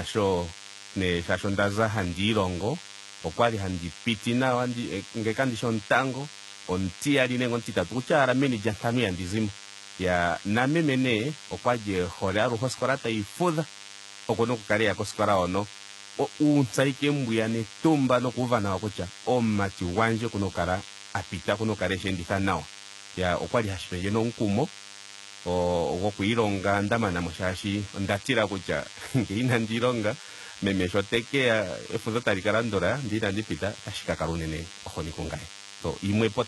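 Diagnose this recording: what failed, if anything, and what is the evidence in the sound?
Analogue wiring stage: a DECT cordless phone buzz runs throughout, a thin 100 Hz buzz rich in harmonics about 20 dB below the speech, from rectified 10 ms radio bursts.

Codec stage: gritty, lispy s sounds and nothing above 11.8 kHz, from start to finish, point to HE-AAC compression as the likely cause. The replicated treble misaligns, which fits roughly 16 kbps.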